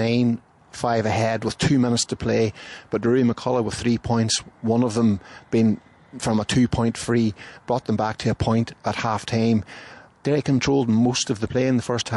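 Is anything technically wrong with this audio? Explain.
Yes. Throughout the clip the audio shows plainly audible damage of the kind left by MP3 compression at a low bitrate, likely around 48 kbps. The remaining detail has a watery, swirling quality with metallic chirps on bright, noisy sounds. This happens because the encoder, short of bits, zeroes weak frequency lines that switch on and off between frames. Sharp attacks also sound smeared.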